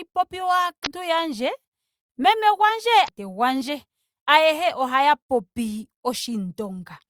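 A speech recording with two brief bursts of damaged data in a compressed stream, at 0.82–0.87 s and again at 3.05–3.09 s, just before "gwandje ayehe". Each lasts about 40 ms and sounds like a short glitch. Corrupted bytes made the decoder misread those frames and lose sync until it found a valid header again. On a spectrogram each shows as a narrow vertical disturbance; the waveform shows an abrupt discontinuity.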